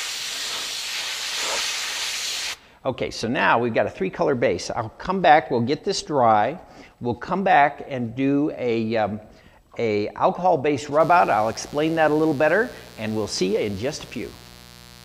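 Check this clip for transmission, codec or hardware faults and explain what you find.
A mains buzz enters the audio from 11.00 s to the end at 15.04 s. Switching spikes from a dimmer, rectifier or unshielded cable arrive twice per 60 Hz cycle, spreading harmonics into the kilohertz range and adding a steady, raspy buzz roughly 25 dB below the signal.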